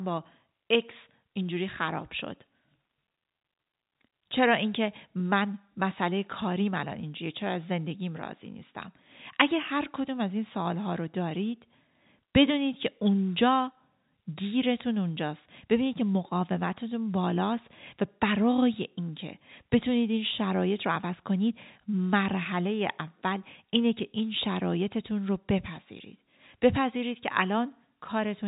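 No faults are audible in the speech; it sits in a standard G.711 mu-law telephone band at 64 kbps, with nothing above 4 kHz and at most a faint level-tracking quantisation hiss.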